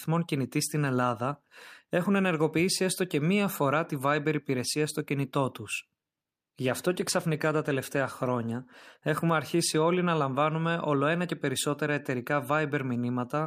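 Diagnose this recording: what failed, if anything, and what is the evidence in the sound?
Call bitrate drop at the codec: from 6.64 to 10.01 s the encoder lost bits, making speech coarse and muffled, fitting about 22 kbps.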